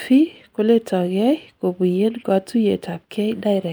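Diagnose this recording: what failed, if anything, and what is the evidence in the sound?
Nothing in this speech recording points to a failure at any stage of the chain. No stage leaves an audible defect, so there is no mechanism to trace.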